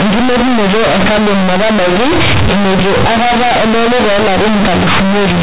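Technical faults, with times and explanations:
Throughout: companded audio read as linear. Mu-law G.711 bytes play as plain 8-bit samples and are never expanded. Each sign change swings across about half the output range. Quiet parts come out as large as loud ones. The speech sounds loud and buzzy, with heavy noise in pauses.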